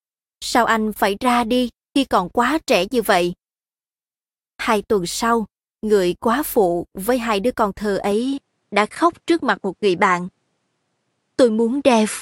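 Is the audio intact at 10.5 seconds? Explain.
No. From 8.12 s, after "hai đứa con thơ", the speech loses everything above 11.4 kHz with a faint new noise floor, likely an input switched to a poorer device.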